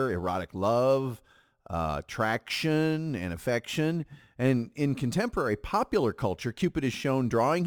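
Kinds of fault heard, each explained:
Crude rate conversion: a gritty, inharmonic fizz clings to the speech throughout, strongest on loud and bright sounds, sitting roughly 30 dB below it. Samples were repeated without filtering, which fits a 44.1 kHz to 48 kHz change, leaving a patterned error that creates unrelated tones.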